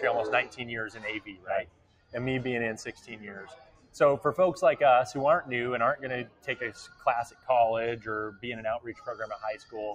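A noise suppressor built for speech is applied to this sound throughout. It treats sustained material as noise, so level swings by roughly 15 dB, pumping and thinning as held parts sink while attacks survive. Unlike a compressor, it reacts to steadiness rather than loudness.

The suppressor cuts the sound hardest at 0.46–2.14 s (about 16 dB down, for roughly a second in total), 2.91–3.96 s (about 15 dB), 6.25–6.48 s (about 15 dB), 6.87–7.49 s (about 13 dB) and 8.86–9.74 s (about 10 dB). Tails and sustains fade early while onsets stay intact, which separates this from dropouts, where everything vanishes at once.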